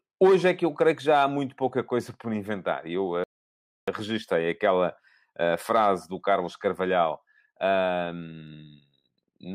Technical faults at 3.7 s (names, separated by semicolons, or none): audio dropout to silence